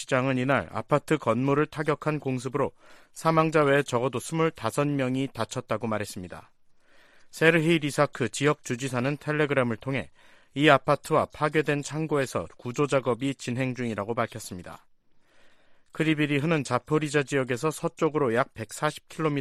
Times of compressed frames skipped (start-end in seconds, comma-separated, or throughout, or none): none